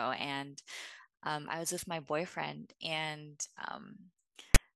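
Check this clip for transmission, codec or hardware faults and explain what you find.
One fault is present. At 4.55 s, file tags are played as audio. Text metadata is read as samples, giving a brief, loud, hard-edged rasp offset to one side.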